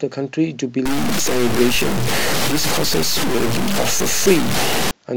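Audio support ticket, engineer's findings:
Grainy, gritty distortion riding on the speech from 0.86 to 4.91 s, error roughly as loud as the speech itself; quiet stretches sputter or drop out. Likely low bit depth without dither at an encode or level-conversion stage, consistent with about 3-bit truncation. Error tracks the signal.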